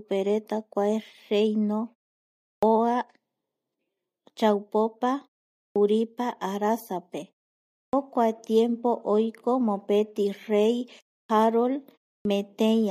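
Clipped start after a pause at 2.57, 5.70, 7.87, 11.24 and 12.19 s: the output wakes late after each 0.3–0.7 s silence, so roughly 55–61 ms of each word's onset is swallowed.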